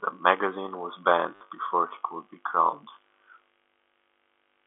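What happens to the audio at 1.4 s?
A run of lost packets hits the stream between 1.35 and 1.41 s, right after "magazine was" and before "before he could be", and the receiver covers the 60 ms gap by replaying the last packet that arrived. That is packet loss with last packet repeated. Six repeats over that span point to 10 ms packets, so the loop buzzes at about 100 Hz, giving a brief robotic stutter inside the narrow G.711 telephone band.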